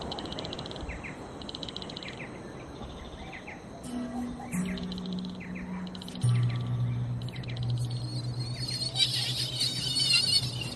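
No audible technical faults.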